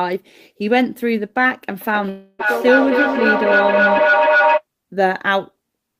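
A speech recording with two overlapping faults. From 1.81 s to 4.65 s there is feedback echo between two devices: each phrase returns about every third of a second. That fits a loop where a second device in the same room plays the call audio and its sound is picked up again by the other device's microphone, which that device's echo canceller does not remove. Here the loop is loud enough that the repeats build rather than decay, peaking about 2 dB above the speech itself. Inside that stretch, from 2.09 s to 2.46 s, the audio gives way to a synthetic buzzy continuation of the last sound lasting about 294 ms, then a 20 ms gap of silence. The speech then resumes with roughly 300 ms of content skipped. This is most likely a long network dropout, with the receiver concealing the missing packets before jumping ahead.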